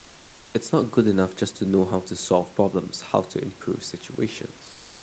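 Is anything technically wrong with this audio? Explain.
Yes. From 4.71 s to the end at 5.03 s, the real room background is replaced by comfort noise, roughly the last 0.32 s. In that pause the call's discontinuous transmission likely stopped sending audio, consistent with Opus DTX. The receiver then filled the gap with synthetic noise shaped to the background's rough spectrum. The room noise, about 29 dB below the loud parts, gives way to a steady, featureless hiss about 1 dB different in level, and it loses the texture it had before. The call path's audio bandwidth tops out near 8 kHz.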